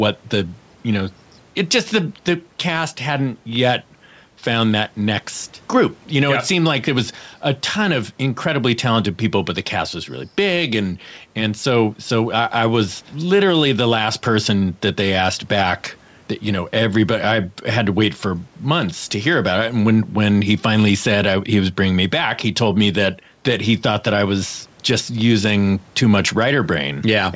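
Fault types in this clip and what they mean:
gain pumping: The level pumps with a swing of around 5 dB throughout, likely from input gain set too high with a fast limiter clamping it. Unlike a noise gate, the background never cuts out.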